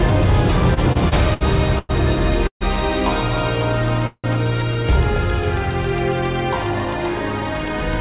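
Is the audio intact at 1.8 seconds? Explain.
No. From 1.79 s to 1.91 s there is a call audio freeze: for about 104 ms the receiver extends the last sound as a fading buzz-like fill rather than passing new audio. The likely cause is packets held up in transit, leaving the jitter buffer empty. When they arrive, playback resumes exactly where it stopped, so nothing is lost, but everything afterward runs about 0.1 s late.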